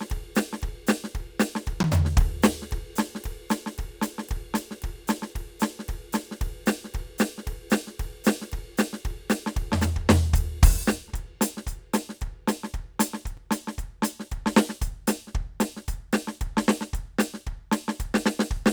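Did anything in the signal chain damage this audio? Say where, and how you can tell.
Yes. At the driver or buffer stage, the music drops into a block of digital silence twice: about 10 ms at 1.83 s and about 5 ms at 13.37 s. Each is heard as a sharp tick. One length is double the other, which fits whole buffers left unfilled and output as zeros. The waveform snaps to a near-flat line and back with no fade. A spectrogram shows a narrow blank gap edged by thin broadband vertical lines.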